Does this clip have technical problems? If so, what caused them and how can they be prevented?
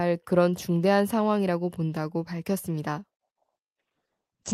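Yes. A call bitrate drop starts at 3.24 s and lasts to the end of the clip. The speech turns coarse and muffled as the top of the band falls to 8 kHz, which fits the Opus encoder being pushed from 40 kbps down to about 9 kbps after the bandwidth estimate collapsed. To prevent it, give the call a stable uplink with enough headroom, or set a higher minimum bitrate floor.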